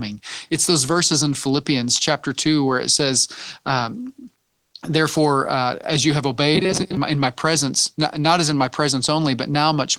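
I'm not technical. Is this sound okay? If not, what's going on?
No. Two faults stand out. From 4.47 to 4.71 s, just after "where it says um", comes comfort noise in place of the background: the real room sound vanishes and a smooth, even hiss stands in. It is not a silent gap. This likely comes from the sender pausing transmission in a quiet moment.

From 6.55 to 6.97 s, between "uh as you have" and "my in my presence", there is robotic sound from repeated short buffers. The voice becomes a metallic buzz fixed at 188 Hz, still roughly tracking the words. That steady pitch separates it from ordinary crackly distortion. Most of that stretch is recycled audio, likely because new audio arrived too slowly.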